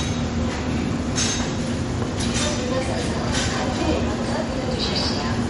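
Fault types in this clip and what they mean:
MP3 compression: Nothing is heard above 11.2 kHz, and the audible damage runs throughout, which likely points to MP3 encoding at a low bitrate near 48 kbps. Short of bits, the encoder cut the treble and dropped weaker frequency detail, which flickers between frames.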